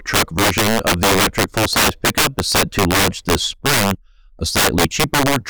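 Integer overflow runs through the whole speech recording. The signal is pushed about 12 dB past full scale, and the arithmetic wraps instead of limiting: any sample beyond the largest representable value jumps to the opposite extreme. Only around 7 percent of samples exceed the limit, so quieter passages stay intact. On louder syllables, each peak instead produces a violent full-range crack, far harsher and more abrupt than ordinary clipping distortion.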